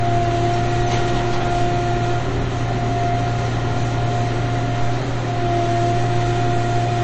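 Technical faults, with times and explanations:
Throughout, MP3 compression. Nothing reaches above 8.3 kHz, so the top end stops at a hard edge. The damage is plainly audible. It likely comes from MP3 coding short of bits, which fits a rate near 32 kbps. The encoder discarded treble and weak detail.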